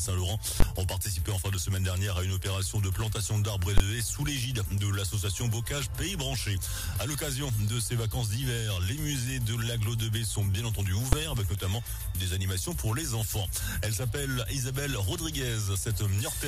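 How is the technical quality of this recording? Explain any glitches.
Three sharp, very loud bangs break up the recording, at 0.60 s, 3.78 s and 11.13 s. Each is a brief burst of invalid numbers at full scale: a calculation produced infinite or invalid values that were pinned to one extreme value, holding the output there for about 20 ms in the first two events and 5 ms in the last, too short to hear as anything but a single bang.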